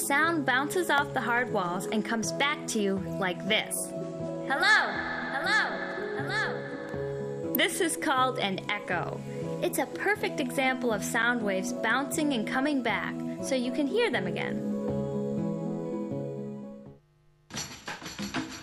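A nearby switch, motor or static discharge likely arced and coupled into the audio line, leaving two electrical switching spikes in the recording. Each lands as a sharp snap laid over the sound: a weaker one at 0.98 s, peaking around -15 dBFS, and a stronger one at 7.55 s, reaching roughly -10 dBFS. Both are only a few milliseconds long, so they read as instant clicks with no body or decay behind them.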